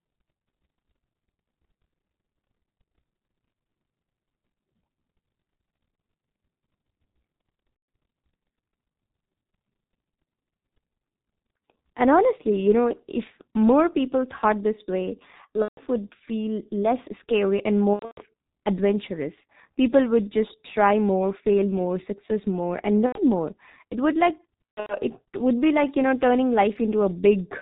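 Speech carried through the G.723.1 codec at a rate that points to about 6.3 kbit/s, heavily damaged: muffled, hoarse and smeared at consonants, with a spectrogram showing nothing above 4 kHz and blurry formants that change only in coarse 30 ms steps. VoIP packet loss concealed by the speech codec appears at 7.94 s, 15.62–15.84 s (between "people thought this way" and "would feel less scary"), 17.93–18.20 s, 23.06–23.22 s (after "more success more and") and 24.65–24.96 s (after "would like"). The gaps span 90 to 210 ms, and the lost stretches at 17.93 s and 24.65 s are scattered, with the longest run 120 ms. In each gap the decoder repeats its last pitch and filter, so the sound becomes a buzzy tone or coloured noise that fades. On a spectrogram these show as frozen, smeared bands, and the waveform shows a tapering envelope.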